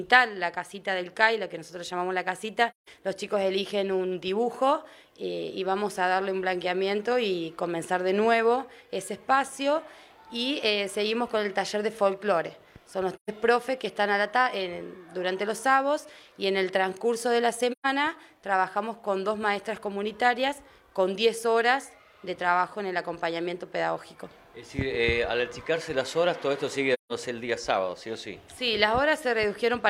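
Gaps at 2.70–2.89 s, 13.15–13.30 s, 17.72–17.86 s and 26.93–27.12 s are AAC frame loss with muting. Lost frames were decoded as silence, leaving 128 to 171 ms holes whose overlapping windows fade the sound out and back in, not a hard-edged dropout.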